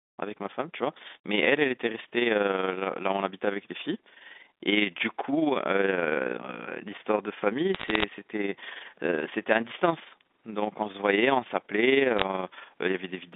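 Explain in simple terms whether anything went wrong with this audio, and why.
Bit errors on a digital phone line cause two bursts of crackle, from 7.75 to 8.04 s and from 12.17 to 12.24 s. A small fraction of the line's bits got flipped, each one corrupting a single sample, and those hitting a high bit produced a sharp tick over the speech.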